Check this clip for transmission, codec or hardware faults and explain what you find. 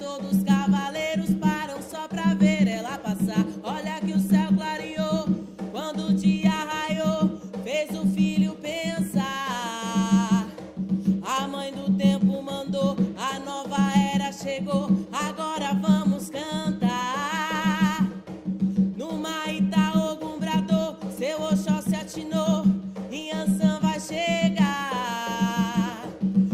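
Nothing stood out on listening to this recording.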